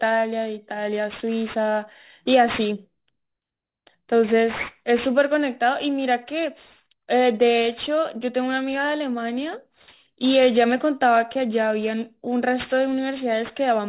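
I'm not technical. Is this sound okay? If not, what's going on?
No. Aliasing runs through the whole clip: the speech was squeezed down to a lower quality without first removing its highest sounds, so everything above about 4 kHz folds back as wrong, gritty tones. This makes hissy sounds like s and sh come out harsh and metallic, which fits a drop to an 8 kHz rate.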